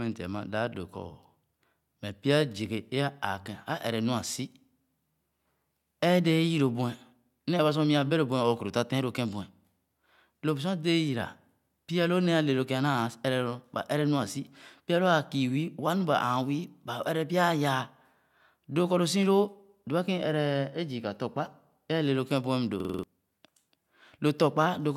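A system hang loop hits this speech recording from 22.80 to 23.03 s: the system stalled while the audio hardware kept replaying its ring buffer, which fits a 2048-sample buffer. A 46 ms fragment repeats five times at 21.5 Hz, a machine-gun stutter replacing about a fifth of a second of speech.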